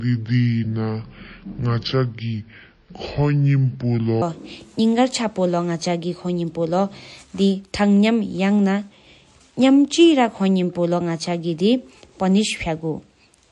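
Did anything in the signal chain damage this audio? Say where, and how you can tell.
Yes. At the codec stage, the whole clip carries plainly audible MP3 compression damage, likely from encoding at a low bitrate, which fits something around 48 kbps. Weak spectral components drop in and out from frame to frame, giving the speech a watery, swirly texture, with metallic chirps on sibilants and smeared consonant onsets.

At the playback or editing stage, the section from 0.0 to 4.2 s is at the wrong speed. It runs at 0.64 times its proper rate, likely because it was clocked against the wrong rate when the clip was assembled or played. Because speed and pitch move together, the speech there is slow and drawn out and sits roughly seven semitones low. At 4.2 s it jumps to normal pitch and tempo.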